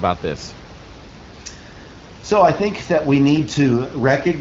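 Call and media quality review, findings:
No faults found in this clip.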